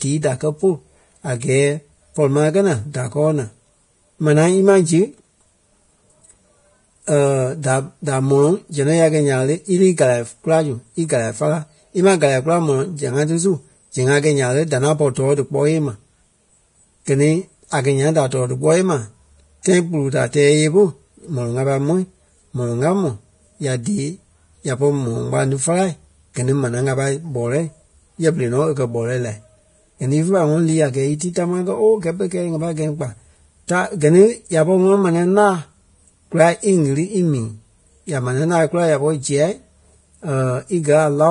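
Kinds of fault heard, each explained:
Vorbis compression: grainy, hissy treble with nothing above 10.6 kHz; the heavy smearing is likely low-bitrate Vorbis, fitting roughly 30 kbps.
Pre-echo: brief hiss smeared ahead of sharp attacks, from 19.63 to 19.65 s and at 31.19 s just before "tamaa kɛ ooo kɛ́".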